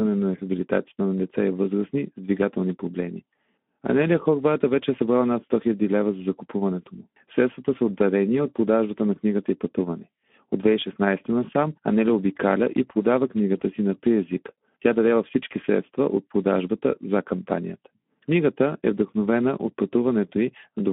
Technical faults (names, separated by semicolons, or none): Speex codec